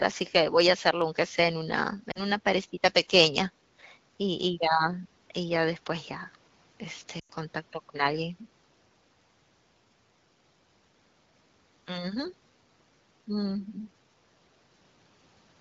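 At 2.11 s the speech briefly drops to near silence for about 0.11 s, and at 7.19 s a longer gap of roughly 0.1 s drops the sound to near silence before it returns thin and rough. Both are lost AMR speech frames. The wideband decoder, running at a rate that fits 12.65 kbit/s, filled the gaps by repeating its last good pitch and vocal tract settings with falling gain. The gaps point to about 40 ms and 100 ms of missing frames.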